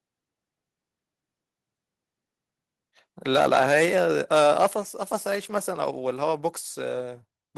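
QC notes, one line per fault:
3.35–4.03 s and 4.33–4.66 s, microphone overload: the loudest syllables in both stretches turn harsh and crackly, with a gritty edge on each peak. The likely cause is input volume set too high, so the signal ran past the converter's ceiling, by about 9 dB in the first stretch and about 6 dB in the second. The tops of the waveform are sliced flat, roughly 4 percent of samples in the first and 7 percent in the second, which produces that brittle distortion.
4.74 s, microphone volume stepped down: the speech and the background noise both drop abruptly by about 5 dB in a single step, right after the second distorted stretch ends. This is likely the call software reacting to the clipping by cutting the device's input volume at once, so everything the microphone picks up becomes noticeably quieter from that instant on.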